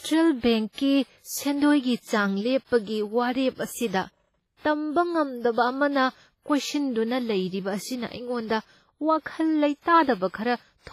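All the way through, the speech has that smeared, ringing, washy quality, with hiss that swells and ducks along with the voice and nothing above 15.3 kHz. That points to likely WMA compression, heavily damaged, which fits a bitrate around 24 kbps.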